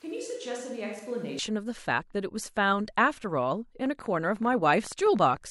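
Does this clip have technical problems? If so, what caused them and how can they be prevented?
Yes. A switch to a distant microphone runs from the very start of the clip to 1.39 s. The speech sounds roomy and hollow, about 10 dB quieter, with room noise roughly 30 dB below it, which is likely because the close microphone's signal was missing and a farther one was used. Monitoring the close microphone during recording and keeping a backup lavalier or recorder prevents this.

A train of clicks runs from 3.86 to 5.38 s: about twenty irregularly spaced pops, roughly 12.6 per second, peaking near the level of the speech itself. This is likely interference from nearby equipment or a faulty connection or power supply injecting pulses. Moving cables away from electronics and checking connections and the power supply prevents it.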